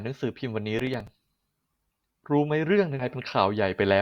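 From 0.79 to 1.07 s, processor overload crackle: repeated missed deadlines replay stale audio in short hard-edged fragments, fitting buffers of around 5 ms, heard as gritty crackle. At 2.99 to 3.05 s, compressed frames are skipped, jumping about 150 ms ahead, consistent with 20 ms frames.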